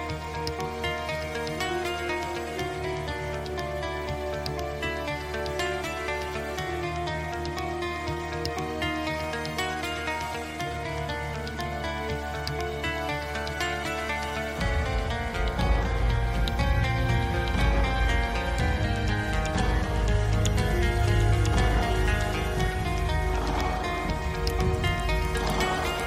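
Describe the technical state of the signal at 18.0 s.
At 18.0 s the signal is intact, with no dropout, distortion, glitch or other technical fault audible at that moment.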